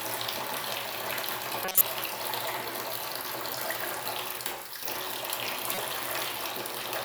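A corrupt frame decoded first at 1.64 to 1.85 s, then again at 5.74 to 5.85 s. Bits inside the compressed data were flipped, yet the decoder played those frames, so misread gains and codes scattered energy across the wrong frequencies. The first burst spans several frames and peaks around -5 dBFS, a loud error lasting about 0.2 s. The second covers only a few frames and is far quieter, a short error of roughly 0.1 s.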